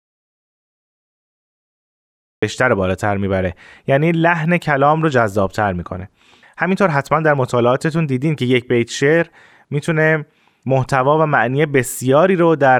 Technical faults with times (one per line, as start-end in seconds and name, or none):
0.00-2.42 audio dropout to silence